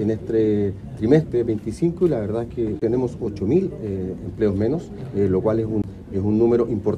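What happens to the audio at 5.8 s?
A CD skip occurs from 5.82 to 5.84 s. The laser jumps tracks, so playback mutes for about 20 ms, then resumes elsewhere.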